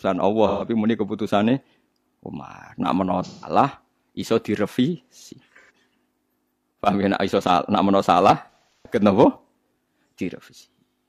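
AAC frame loss with concealment occurs at 0.48–0.64 s (about 128 ms, just before "muni keputusannya"), 3.25–3.49 s (about 171 ms), 5.61–5.70 s (about 85 ms, after "iso direvisi"), and 8.42–8.99 s (341 ms lost in bursts, longest around 150 ms, after "salah nak menawa salah"). The decoder patched each gap from the last good spectrum, giving smeared, noisy, phasey blurs. On a spectrogram, formant motion freezes into flat, grainy bands; the waveform's envelope goes static.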